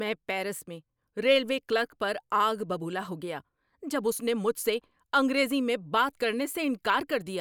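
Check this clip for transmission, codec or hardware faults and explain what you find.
No faults found in this clip.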